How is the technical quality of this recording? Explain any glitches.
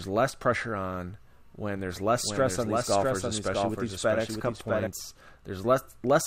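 The recording has two faults, which overlap near the end of the first one.

From 1.77 s to 4.87 s, right after "less pressure on when", there is a doubled audio track. A second copy of the speech runs about 0.7 s behind the original and about 5 dB quieter. The likely cause is that the same signal was captured again through a slower path, or that an edit left two out-of-step copies. It differs from an echo or room reverb because the delayed copy is full-band, has no decay or added room colour, and switches on and off abruptly.

From 4.22 s to 4.61 s, inside that doubled stretch, there is DAB burbling. Bit errors in weak digital radio reception got past the error correction and corrupted the MP2 data. Wrong samples put short blips of noise into single sub-bands, which produces a burbling texture over the speech for about 0.4 s. This differs from ordinary low-bitrate codec smearing because it comes as a short, erratic burst rather than a steady dullness or swirl across the whole clip.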